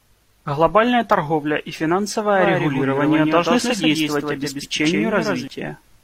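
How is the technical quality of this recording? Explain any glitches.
The recording has one clear glitch: a doubled track over the middle and end of the speech.

Doubled audio track, from 2.36 s to 5.48 s: a second copy of the speech runs roughly 150 ms behind the original, about 5 dB quieter. The likely cause is the same signal arriving twice, once through a slower path. The trailing copy is full-band and dry, with no room colour, so it sounds like a crisp slapback echo. It cuts in and out abruptly at both ends.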